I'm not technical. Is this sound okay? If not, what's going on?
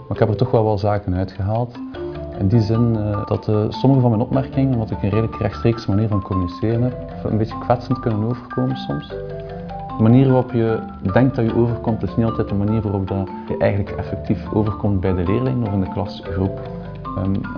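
Yes, no faults heard.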